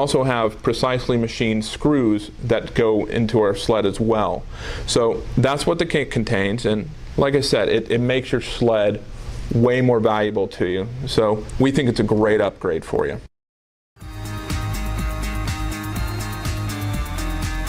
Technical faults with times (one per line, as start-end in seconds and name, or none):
12.22-16.22 adaptive stream at a lower bitrate